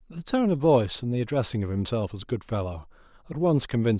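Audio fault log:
No fault can be heard anywhere in the speech. Every passage sounds as it should, with nothing to log.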